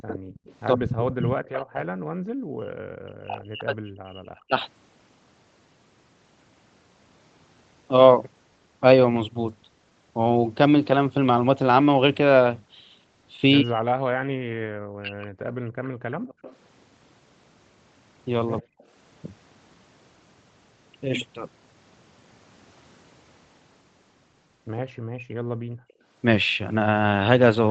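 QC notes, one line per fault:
0.00–1.56 s and 15.85–18.84 s, echo leak: a faint copy of the speech trails it by 115 ms. It's roughly 15 dB down in the first stretch and quieter, around 25 dB down, in the second. Likely a loudspeaker on one side whose echo canceller let part of its mic pickup slip back.
0.75–4.56 s, 13.62–18.75 s and 25.14 s to the end, speech suppressed in double talk: the talker dips hard, by as much as 40 dB, while the other side is talking. The likely reason is that the echo canceller couldn't separate the talker from the loudspeaker echo and ducked both.
16.15–16.42 s, background gated by the echo canceller: the room sound falls away for about a third of a second, dropping by about 38 dB at its deepest, then comes straight back. The canceller clamped the mic down hard while the loudspeaker was playing, then let go.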